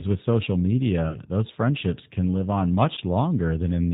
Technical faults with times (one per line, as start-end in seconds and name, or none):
0.00-3.93 G.729 codec
1.09-1.19 VoIP packet loss concealed by the speech codec
2.94-2.99 VoIP packet loss concealed by the speech codec